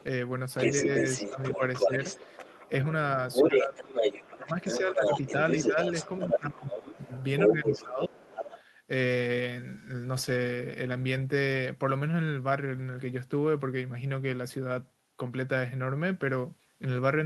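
A speech recording with two linked faults from a loudspeaker-based call. First, the other side's voice leaking through: from 0.0 to 2.69 s and again from 3.31 to 8.63 s a second voice runs underneath the talker at roughly the same loudness. The likely cause is an echo canceller that failed to remove the far end's loudspeaker playback from the microphone signal, so the remote voice is sent back. Second, speech is suppressed in double talk where the two voices overlap. From 0.84 to 1.89 s the talker dips slightly, about 5 dB, for brief moments totalling around a sixth of a second. The drops deepen to about 15 dB at 3.43 to 3.79 s and 4.35 to 5.03 s, and most heavily from 5.7 to 8.25 s, where roughly a second and a half of the talker's speech is pushed down in pieces. This is likely the canceller turning down the whole signal when it cannot separate the near talker from the echo.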